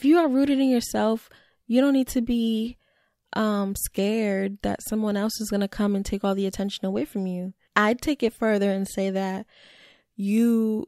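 Nothing in the recording stood out as a technical problem on listening.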